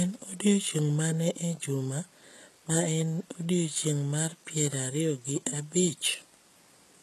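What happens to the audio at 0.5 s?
HE-AAC compression runs through the whole clip, including at 0.5 s. Nothing survives above about 12.3 kHz, and the treble is likely rebuilt by spectral band replication, copying lower bands upward, so sibilants turn gritty and metallic. The plainly audible damage fits a bitrate of about 16 kbps.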